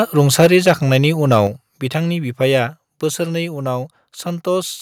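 Input gain was likely set too high, driving the converter past full scale and causing microphone overload from 0.18 to 0.71 s, about 5 dB over, with a small share of samples flattened into a harsh crackle. At 0.46 s, likely reacting to that, the call software stepped the microphone volume down by 2 dB, an abrupt dip in level. A shorter overload, about 2 dB over, returns at 1.32 to 1.37 s, and a second step down, of 5 dB, follows at 1.47 s, just before "बिथांनि बिफाया बोसोरनै".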